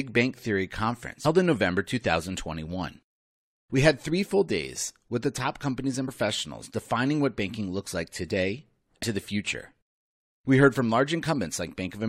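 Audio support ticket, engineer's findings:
Short glitches in the speech at 1.24 s, 6.07 s and 9.02 s, each under 20 ms. Damaged data in a compressed stream: corrupted bytes in the encoded file, and the decoder misreads the affected frame, loses sync and resyncs at the next header. Spectrogram: thin broadband vertical streaks breaking the harmonic bands. Waveform: brief disruption not matching the surrounding envelope. Probable component: storage or transport layer upstream of the decoder.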